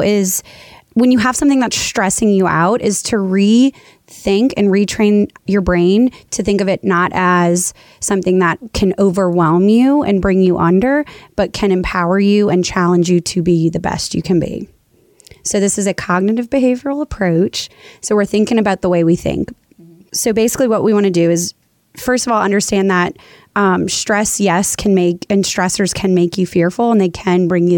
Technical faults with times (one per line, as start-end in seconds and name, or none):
none